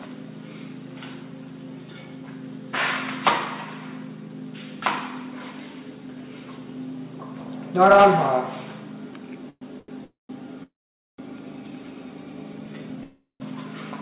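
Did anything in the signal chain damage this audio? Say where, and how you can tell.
Yes. Hard clipping sits at 7.81 to 8.07 s, at a gain stage or converter driven about 5 dB past full scale. Peaks are cut flat, giving a crackly fuzz. The waveform shows squared-off tops, and the spectrogram shows harmonic smear reaching the 4 kHz ceiling, which fits a G.711 telephone-band path.

Call audio freezes occur at 9.50 to 9.63, 10.04 to 10.31, 10.63 to 11.20 and 13.03 to 13.42 s. These are likely network delays that emptied the jitter buffer. Each freeze holds the last sound as a fading buzz or hiss, then drops to silence of roughly 40, 160, 480 and 140 ms. Audio resumes where it stopped, so nothing is lost.

A short stall from a late packet appears at 9.79 to 9.90 s, inside the jitter buffer. The last sound is stretched for 88 ms with a slight buzz or dip before the stream carries on unbroken. 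A spectrogram shows flat, smeared horizontal bands where the frame was held.

A jitter buffer slow-down runs from 12.53 to 13.02 s. Repeated pitch periods add 68 ms, so playback drops to 87% speed at unchanged pitch. A waveform shows near-identical cycles repeated back to back, and the spectrogram shows stretched harmonics without any frequency shift.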